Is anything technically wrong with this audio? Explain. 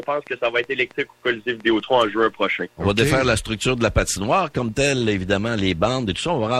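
Yes. From 0.03 s to 3.35 s there is a train of clicks: about ten similar pulses, roughly 3.3 per second at an uneven pace, peaking about as loud as the sound itself. It is heard as ticking laid over the audio, pauses included. The likely cause is interference or a faulty connection or power supply injecting short pulses. On a waveform they appear as isolated spikes. A spectrogram shows thin vertical lines spanning the full frequency range, irregularly spaced.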